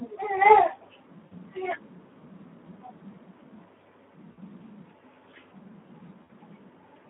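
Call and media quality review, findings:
Hoarse, grainy speech with a noisy edge for the whole clip; band limited to roughly 200 Hz to 3.5 kHz. Speex codec at a low quality setting; damage fits a narrowband mode near 11 kbps. Too few bits for the CELP excitation, so voicing turns rough and noise-like throughout.

Brief stretched, smeared sound that fades, then weak, distorted speech for a moment after each, at 1.26 to 1.35 s, 4.31 to 4.38 s and 6.24 to 6.30 s, each about 60 ms. VoIP packet loss concealed by the speech codec, each gap fitting three 20 ms frames. The decoder extends its last pitch and filter with falling gain, and because its state builds frame on frame, recovery lags after packets resume.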